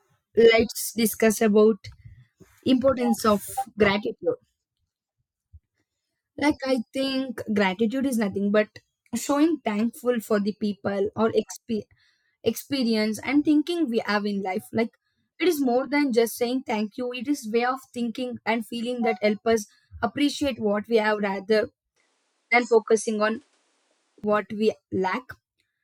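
After "what we have rather", 21.96 to 24.24 s goes dull, nothing above 11.1 kHz, faint new hiss. Likely the input switched to a poorer device.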